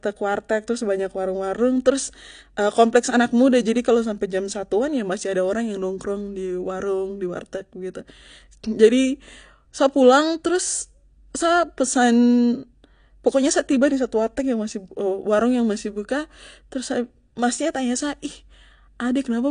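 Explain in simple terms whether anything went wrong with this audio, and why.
Yes, AAC compression is the likely cause. From start to finish the speech sounds plainly damaged, with nothing above 9.8 kHz and a smeared, warbling or fizzy texture on hissing sounds. That texture is what separates it from plain muffling, which would only sound dull.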